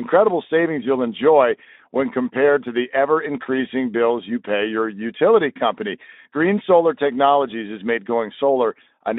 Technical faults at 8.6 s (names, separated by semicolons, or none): none